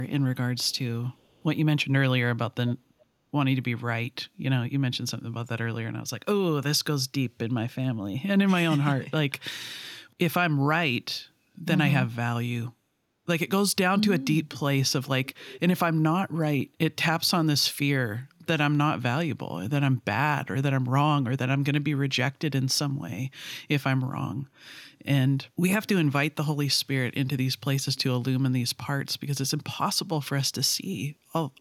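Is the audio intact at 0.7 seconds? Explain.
No. An echo leak runs from 0.63 to 0.78 s. A delayed copy of the speech returns about 368 ms late, at a very low level, roughly 40 dB below the speech. It is likely an echo canceller on a loudspeaker end letting picked-up sound through.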